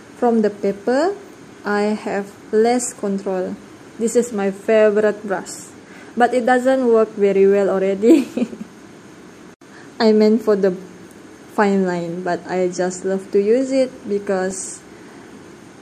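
DAB burbling appears at 2.71 to 2.76 s and again at 14.51 s. Brief noise blips come from residual bit errors, around 0.1 to 0.15 percent, corrupting MP2 sub-band samples across a few frames.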